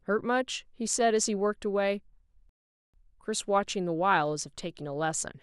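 A rebuffering stall interrupts the speech from 2.49 s to 2.94 s. The player's supply of downloaded audio ran dry, so playback halted and waited for more data before carrying on. The speech drops abruptly into silence for about 443 ms, then picks up at exactly the point where it broke off, with nothing skipped. The stall inserts that gap into the timeline, stretching the clip rather than removing any of its sound.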